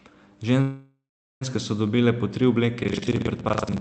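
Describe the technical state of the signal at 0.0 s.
At 0.0 s the speech is intact, with no fault present, only the ordinary coding character of the Opus call path it passed through.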